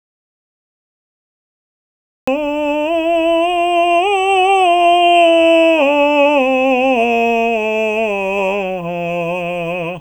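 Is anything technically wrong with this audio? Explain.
Yes. The music opens with an audio dropout to silence already under way, lasting from the very start to 2.28 s. The input feeding the recorder was likely cut off, through a disconnected device, a failed link or an accidental mute, while recording carried on writing silence. The result is dead silence with no room tone at all, and at 2.28 s the music bursts in mid-flow, whatever came before it lost.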